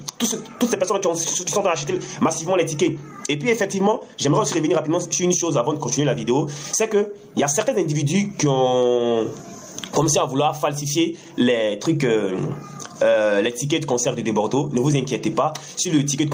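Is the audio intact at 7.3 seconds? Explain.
No. At 7.3 seconds, as across the whole clip, the audio shows gain pumping, with a gain swing of around 20 dB. The likely cause is an input gain set far too high, with a fast limiter clamping it down on each peak. On a waveform the envelope looks flattened and squashed.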